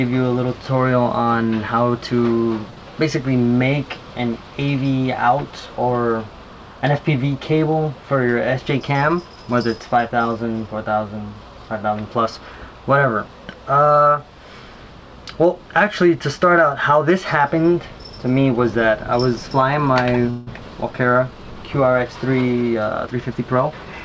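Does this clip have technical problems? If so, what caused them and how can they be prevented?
Yes. At 2.70 s a late packet emptied the jitter buffer, causing a short stall: the receiver stretched the last sound for 68 ms, holding it too long with a slight buzz or dip. A slightly deeper jitter buffer would absorb such late packets.

From 8.59 to 9.20 s and again from 22.35 to 23.93 s, the jitter buffer speed-up trimmed the backlog by cutting pitch-period pieces, about 70 ms and 200 ms in total. The sound runs hurried at 111% speed with unchanged pitch. Smoother network delivery, so packets don't bunch up, would keep the buffer from overfilling.

From 20.30 to 20.49 s the call audio freeze continued the last sound as a fading buzz or hiss for 166 ms, inserting a gap before resuming. This was likely caused by packets held up in transit. A more stable connection or prioritised call traffic would prevent it.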